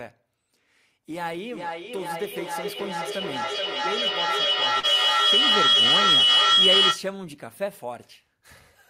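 At 1.14 s a feedback howl starts building and doesn't let up until 7.11 s. A mic is picking up a loudspeaker carrying the same call, and each pass round that loop comes back a little louder. So the repeats swell rather than die away and close in on a tone around 3 kHz, pulsing roughly every 0.4 s with the loop delay. At its peak it sits about 12 dB above the speech.

Right in the middle of the howl, from 4.79 to 4.86 s, there's a short concealed packet loss. About 40 ms of the stream didn't reach the decoder in time, and the receiver patched roughly 36 ms of it by extending whatever sound came just before, then crossfading back into the real signal. You hear it as a quick smear or wobble, and any short consonant in that spot could simply be gone.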